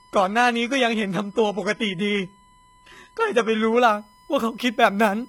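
From the first moment to the end, USB whine leaks in through the power or ground as the bus draws current in 1 ms frames. It is a steady, fixed-pitch 1 kHz tone, quietly present around 35 dB below the speech.

Over the same opening, from 0 to 3.79 s, an adaptive stream starting at a low bitrate is playing a low-bitrate tier. The speech sounds dull and smeared, with synthetic-sounding treble and nothing above 11.8 kHz, which points to a heavily compressed format. At 3.79 s the player jumps to a better tier with no gap. Its more natural top end suggests something like a 96 kbit/s stream.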